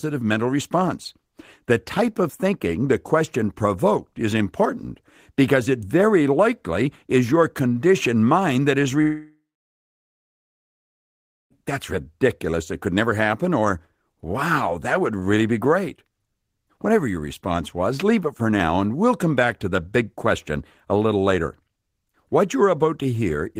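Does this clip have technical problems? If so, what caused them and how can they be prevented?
Yes. From 9.01 to 11.52 s the speech breaks off into a buzzy tail that fades within a few tenths of a second, leaving about 2.1 s of near-silence. The speech then resumes further on, with roughly 2.5 s of material gone. This is likely a long network dropout, where the receiver stretched the last sound it had and then gave up. It differs from brief packet loss, whose gaps are patched in milliseconds, and from a natural pause, which has no fading buzz and no jump in the speech. Using a stable wired connection, or a larger jitter buffer with retransmission, would help prevent it.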